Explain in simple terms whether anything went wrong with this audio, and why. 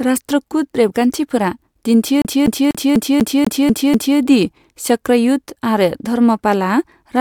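Right after "रेबगान्थिफोरा दिन्थियो", from 2.22 to 4.18 s, the speech gets stuck like a CD stuck on one turn: the same quarter-second snippet replays eight times with a tiny drop at each jump, before it moves on to "दि चक्रयुध आरो धर्मपालआ".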